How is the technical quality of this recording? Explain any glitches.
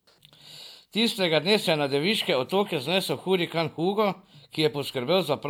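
Nothing in the recording stood out as a technical problem on listening, so there are no glitches to explain.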